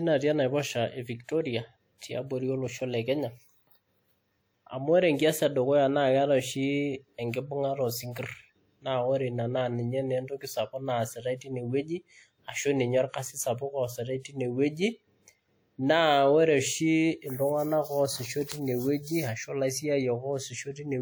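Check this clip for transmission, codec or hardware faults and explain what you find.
There's codec trouble: pre-echo at 1.98 and 14.20 s. Block quantisation noise leaks ahead of sharp attacks, leaving a short hiss of roughly 36 and 47 ms and softening each onset.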